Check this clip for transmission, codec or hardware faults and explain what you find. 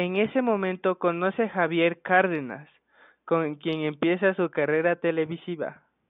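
Nothing stood out on listening to this speech recording, and the faint room noise sitting about 54 dB below the speech belongs to the recording itself.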